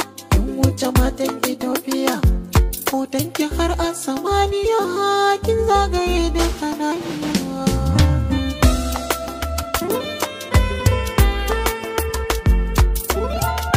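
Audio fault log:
No faults were heard anywhere in this audio. Nothing in the clip calls for an entry in this log.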